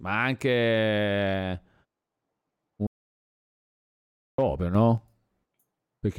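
At 2.87 s the speech cuts out into an audio dropout to silence lasting about 1.5 s, until 4.38 s. It's dead silence with no room tone, so the input likely dropped while the recorder kept writing. Whatever was said there is simply gone.

Then at 4.75 s there's a sudden gain jump, up about 5 dB, with voice and background noise leaping together until it settles back at 4.98 s. That instant step points to a gain change likely applied without any ramp.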